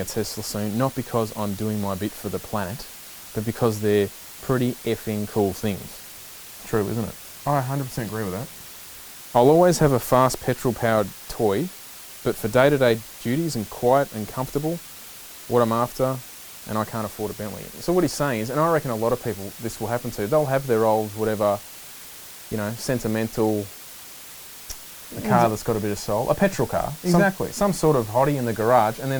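From start to finish the speech carries low bit depth with dither: the signal has been reduced to 7 bits, with a small random dither added before rounding, so the quantisation error becomes steady white noise rather than distortion. The result is a constant, even hiss, roughly 20 dB below the speech. On a spectrogram it appears as a uniform grey floor across all frequencies, and the waveform shows a thick noise band through every pause.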